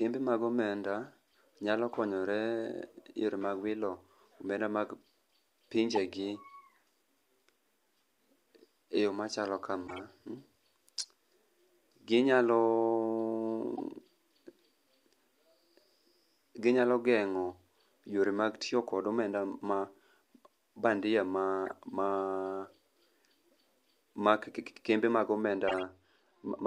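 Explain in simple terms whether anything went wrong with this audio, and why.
Something went wrong in two ways.

The first is a corrupt frame decoded. The speech is stored in small compressed chunks called frames. A few of those chunks were damaged, but the player used them anyway. It put sound where it did not belong. You hear short chirps or bursts of noise at 5.92 to 5.98, 9.87 to 10.00, 10.99 to 11.07, 13.77 to 13.80, 21.66 to 21.72 and 25.68 to 25.83 seconds. Each lasts only a split second.

The second is de-emphasis applied wrongly. From 25.43 seconds to the end, a treble cut was applied that should not have been. It removes high sounds that were never boosted in the first place. So the speech turns dull and muffled, as if heard through a cloth.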